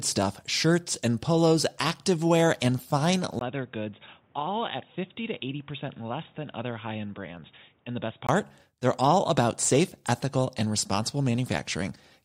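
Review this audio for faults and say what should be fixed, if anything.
After "polos activewear and fine", at 3.39 s a short gap gives way to duller speech, about 10 dB quieter, with nothing above 3.8 kHz and faint new background noise, until 8.29 s. The input likely switched to a poorer device. A plain low-pass fault would not also change level and background noise together. To prevent it, lock the recording input so the system cannot swap devices mid-session.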